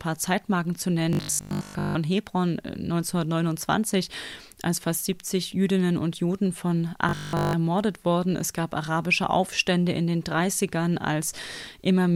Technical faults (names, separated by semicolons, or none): robotic sound from repeated short buffers